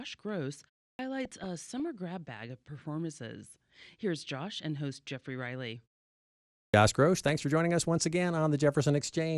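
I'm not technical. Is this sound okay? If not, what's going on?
No. There are three problems.

The whole recording sounds dull, gurgly and grainy. This is likely MP2 compression. It splits the sound into many narrow bands and gives each only a few bits. The top bands switch off, and the rest turn coarse.

Twice, speech starts abruptly with its opening cut away. This is a clipped start after a pause. The playback device dozes off during silence and wakes late. At 0.93 s, after a short pause, about 61 ms is lost. At 6.68 s, after a longer pause, about 57 ms is lost.

There are also two bursts of DAB burbling. Weak digital radio reception lets errors slip into the signal, and short blips of noise appear in single bands. The first runs from 1.24 to 1.87 s, just before "grab bag of performances". The second runs from 7.24 to 7.43 s, just before "for joining us once".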